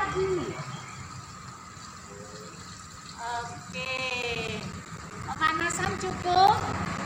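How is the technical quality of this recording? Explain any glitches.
The recording has one clear fault. Periodic USB or driver dropouts run from 3.72 to 6.98 s, about thirty of them, spaced every 0.125 s. Something is stalling the audio path on a fixed cycle, each time dropping around 10 ms into silence. The result is a steady ticking over the sound.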